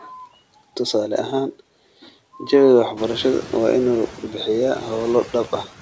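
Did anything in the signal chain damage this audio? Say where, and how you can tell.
Yes: noise suppressor artifacts from call processing. A spectrogram shows the noise floor dropping about 12 dB between words and swelling back under speech throughout.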